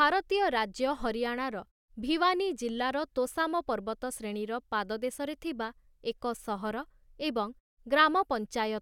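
No technical faults are audible.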